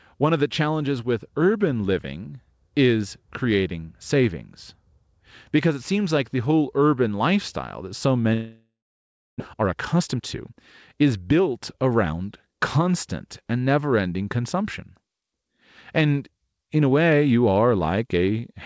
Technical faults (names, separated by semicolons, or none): long network dropout; jitter buffer speed-up